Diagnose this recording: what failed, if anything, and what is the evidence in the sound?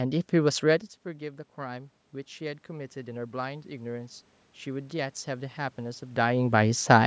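Automatic gain rising (call processing), 1.19–6.3 s: input fell about 15 dB, gain climbed about 9 dB; waveform envelope and background noise swell together.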